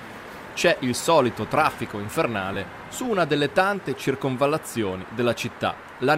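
At 2.54 to 2.56 s there are lost LE Audio frames: a 20 ms gap, which fits two 10 ms frames, that the LC3 decoder covers by repeating the last spectrum with randomised signs. It sounds like a brief noisy smear against the light, ordinary coding of the surrounding sound.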